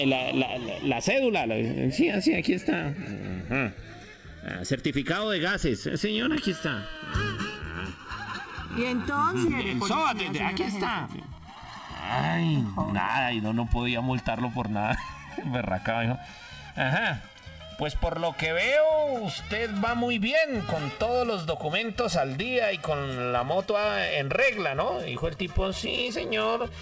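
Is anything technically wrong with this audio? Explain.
Yes. There are three faults, all heard through a call-codec path with nothing above 8 kHz, which fits G.722 at 64 kbps.

Channels drifting apart runs through the whole clip. The two channels come from devices on separate clocks, off by around 50 parts per million. The delay between them slides to about 2 ms by the end. Summed to mono, comb notches sweep slowly, giving a slow flanging.

A skip ahead happens between 9.48 and 9.50 s. Around one second of audio was dropped while later audio was already waiting. Nothing fills the gap. Playback jumps straight forward, and the two sides join almost directly.

A jitter buffer speed-up runs from 11.06 to 13.87 s. The buffer held too much audio, so the receiver cut many short pitch-period pieces, around half a second in total. The sound plays at 119% speed at unchanged pitch and feels hurried.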